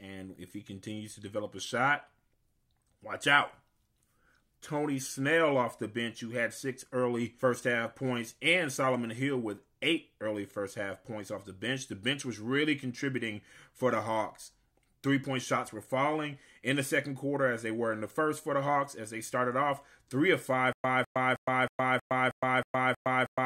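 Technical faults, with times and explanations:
20.73–23.46 s, stutter with silent gaps: after "off three of five", one 203 ms fragment repeats eight times at a steady 317 ms pace, separated by 114 ms of digital silence, likely from a stalled stream replaying its last buffer. Unlike a plain dropout, the same burst keeps returning, and the audio never resumes.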